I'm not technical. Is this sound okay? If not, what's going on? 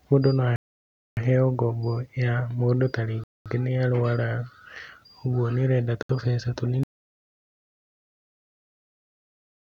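No, not quite. There are two problems in this speech clip.

First, the sound cuts to silence three times and then carries on: at 0.56 s for about 0.6 s, at 3.24 s for about 0.22 s, and at 6.03 s for about 70 ms. That's most likely a Bluetooth stall. Interference held up the wireless signal, the headphones ran out of audio, and playback paused until the signal caught up.

Second, from 6.83 s to the very end, there's nothing at all, not even background hiss. That's an audio dropout to silence. The input was lost, probably through a disconnection or a mute, and the recording kept going with pure silence, so whatever was said after that point is gone.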